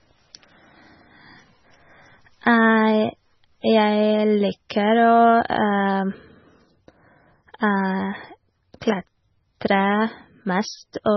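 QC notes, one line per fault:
Throughout, MP3 compression, likely at a very low bitrate (the damage fits something like 16 kbps): nothing above 5.9 kHz, so the speech sounds dull. Heavy watery swirl comes from weak frequency lines dropping in and out frame to frame, with smeared attacks and chirpy s sounds.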